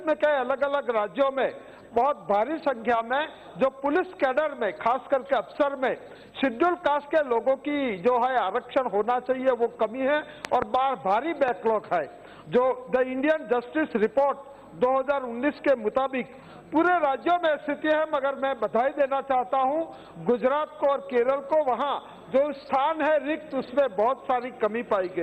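Loud pops occur between 10.45 and 10.64 s, where two sharp pops land in quick succession and peak around 15 dB above the surrounding sound, and again from 11.48 to 11.50 s, where a single shorter pop rises roughly 10 dB above it. The likely cause is a sudden voltage step or spike, from a plug, switch, static discharge or driver glitch, being added to the signal and briefly shaped by the circuitry after it. The sound continues underneath each pop.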